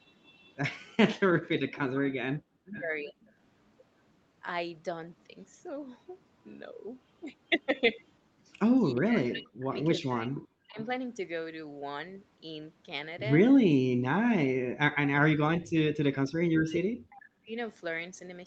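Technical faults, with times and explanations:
0.22–0.88, 1.76–1.80, 2.75–3.26 and 9.73–10.85 s, echo leak: you can hear a faint delayed copy of the speech trailing the original by about 374 to 425 ms. It sits about 35 dB down in the first stretch and climbs to about 25 to 20 dB down in the later ones. That's likely a loudspeaker on the far end whose echo canceller didn't fully scrub what its mic picked up, so a chunk got sent back to us.
1.37–3.13, 8.94–10.78 and 14.83–17.57 s, speech suppressed in double talk: the talker's level keeps sagging, dropping by as much as about 40 dB. Roughly a second of the first span is hit, around a second and a half of the second, and about two seconds of the third. The likely cause is both sides talking at once, with the echo canceller unable to tell the local talker from loudspeaker echo and pulling everything down together.
3.16–3.29 s, background gated by the echo canceller: the room tone briefly ducks by about 16 dB for around a tenth of a second, then comes right back. 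That's the canceller clamping the mic hard while the loudspeaker was active, then releasing once it decided the coast was clear.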